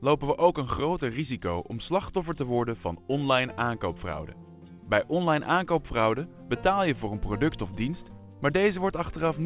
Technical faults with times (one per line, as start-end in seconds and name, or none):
none